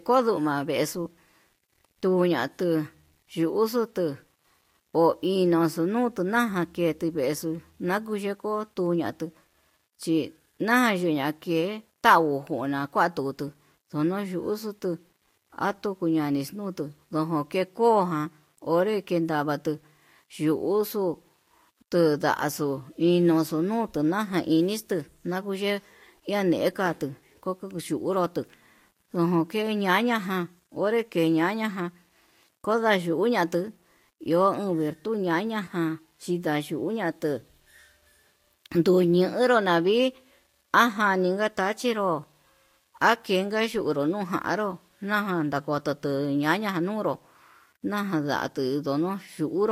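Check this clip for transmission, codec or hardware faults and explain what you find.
One fault runs through the whole recording: low bit depth without dither. The speech has a grainy, gritty edge, and the quantisation error is roughly 45 dB below the signal. That level fits about 10-bit resolution, likely from rounding with no dither added. Because the error tracks the waveform, quiet passages and decaying syllables sound roughest. On a waveform, low-level stretches show visible stair-steps. On a spectrogram, a signal-dependent noise floor rises and falls with each utterance rather than staying constant.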